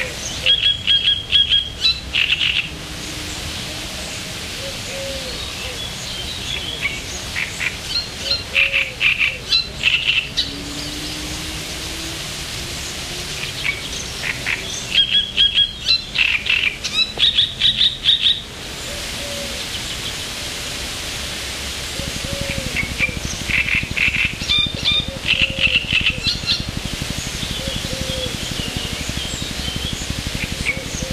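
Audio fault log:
21.99–31.12 s: train of clicks, about a hundred near-identical pulses at a steady 12 per second, running to the end and standing roughly 10 dB above the sound. The regular ticking likely comes from interference from nearby equipment or a faulty connection or power supply injecting periodic pulses.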